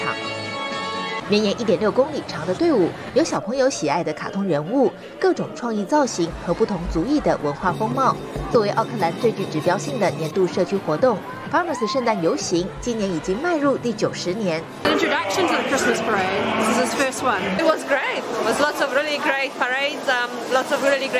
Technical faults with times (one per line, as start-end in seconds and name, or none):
none